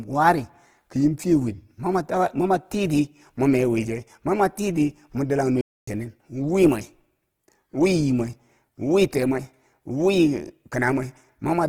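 Throughout, the speech carries plainly audible damage of the kind low-rate Opus compression produces, likely in its CELT music mode at a rate near 16 kbps. Starved bands are filled with folded or noise content, so tones sound grainy and rough, though fullband.

At 5.61 s a playback stall, likely the player running out of data, silences the output for about 0.26 s until 5.88 s. The speech cuts off mid-flow, leaving an abrupt gap before resuming.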